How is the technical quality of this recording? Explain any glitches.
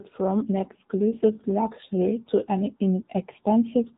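The speech sounds thin, buzzy and somewhat synthetic throughout, with plainly audible codec damage and nothing above 3.8 kHz. This is the AMR narrowband mobile codec: the voice is rebuilt from a vocal-tract model driven by sparse pulses, and that buzziness fits a low mode of roughly 8 kbps.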